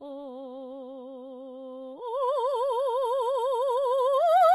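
Throughout, the treble sounds gritty and metallic with nothing above 11.8 kHz, likely HE-AAC compression rebuilding the top from copied lower bands, which fits a very low bitrate near 16 kbps.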